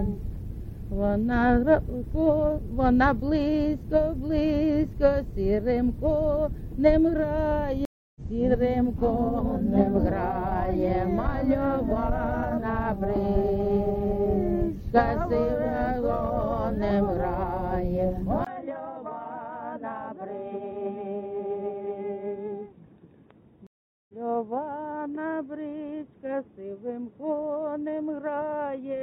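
At 7.85 s a stream reconnect occurs: playback drops out for 0.3 s, then a fresh decoder picks up mid-stream, resuming roughly a fifth of a second ahead, so a short stretch is skipped and the audio fades back in.

From 18.45 s to the end the sound turns narrow and dull, with nothing above 3.8 kHz, a 20 ms gap at the change, roughly a 10 dB level drop and a faint new noise floor. This is likely an input switched to a poorer device.

A second stream reconnect at 23.67 s silences 0.42 s and resumes roughly 0.3 s later.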